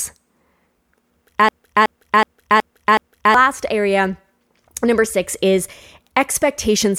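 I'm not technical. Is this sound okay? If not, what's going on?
No. From about 1.49 s to 3.34 s the speech gets stuck in a system hang loop: the computer froze, but the sound hardware kept replaying the last piece of audio it held. That piece is about 0.37 s long, which fits a 16384-sample buffer, and it repeats five times, roughly 2.7 times per second, as a choppy stutter. Around two seconds of the real recording never made it through.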